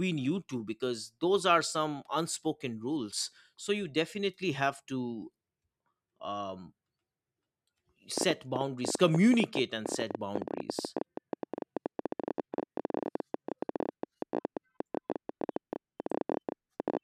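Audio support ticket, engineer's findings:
Train of clicks, 8.18 to 16.98 s: about a hundred same-shaped pulses, irregular spacing near 13.8 per second, peaking well above the speech, roughly 15 dB. Likely interference or a faulty connection or power supply. Continues through pauses, so not signal-driven clipping or crackle.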